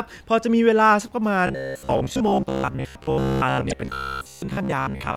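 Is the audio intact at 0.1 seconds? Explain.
Yes, at 0.1 s the speech plays through intact, with no dropout, click, distortion or other fault at that moment.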